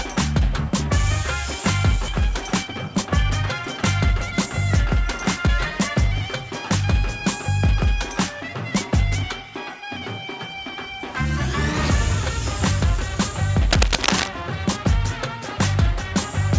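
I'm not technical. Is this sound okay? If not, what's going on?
No. At 2.08 s there is a skip ahead. Part of the audio never made it through, roughly three quarters of a second. Playback jumps straight past the missing part with no pause, so the sound on either side is stitched together abruptly.

Right after that comes jitter buffer speed-up. The call system had a backlog of audio waiting, so it trimmed tiny slivers out to catch up. The sound plays faster without getting higher in pitch: about 19% faster from 2.32 to 3.10 s, then about 6% faster from 3.58 to 4.54 s, and 5% faster from 4.95 to 6.05 s.

From 13.71 to 14.28 s there is cable scratch noise. It sounds like a rough scratching or rustling on top of the audio, about as loud as the sound itself. The likely cause is a loose or worn cable or connector being moved.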